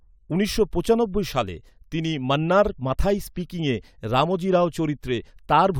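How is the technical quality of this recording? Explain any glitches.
No glitches or technical faults turn up anywhere in the recording.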